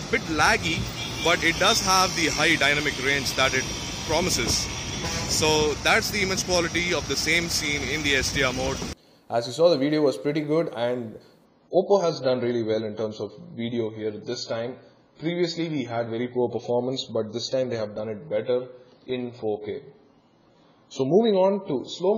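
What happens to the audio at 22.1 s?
At 22.1 s you're still in the adaptive stream at a lower bitrate, which runs from 11.45 s to the end. Nothing reaches above 7 kHz, and the thin, smeary top fits a very low-bitrate AAC rendition.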